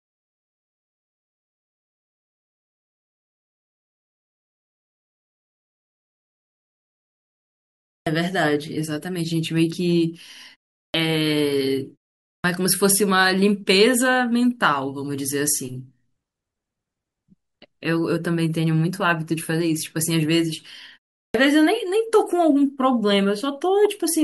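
Clipped start after a pause occurs at 7.96, 10.84, 12.33 and 21.24 s. The output device drops into a sleep state during silence and needs time to wake, so about 100 to 110 ms of each onset is swallowed and the speech begins abruptly, missing its first sounds.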